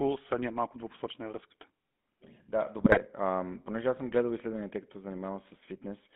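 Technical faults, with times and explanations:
Throughout: GSM full-rate codec. Sound is confined to roughly 200 Hz to 3.5 kHz and plainly buzzy and gravelly, which fits coarse pulse-based excitation at about 13 kbps.
2.78–2.98 s: GSM bit errors. Corrupted filter, pitch and gain parameters across several consecutive frames produce squawks, pops and gargling, pointing to a badly degraded radio link.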